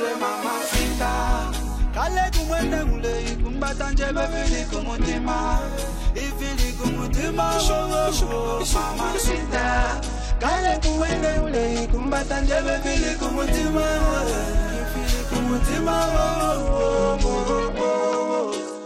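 A Bluetooth SBC bit pool drop occurs three times, from 3.12 to 5.54 s, from 9.28 to 13.25 s, and from 16.59 s to the end at 18.86 s. Each time the link appears to have congested and the encoder cut its bit budget, which fits a fall from bit pool 31 to about 10, or roughly 77 kbps. The highest sub-bands lose their bits and the rest are coarsely quantised, so the treble goes dull and a gritty noise rises until the rate recovers.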